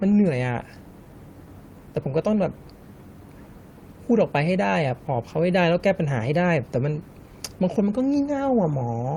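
No technical faults can be heard anywhere in the speech.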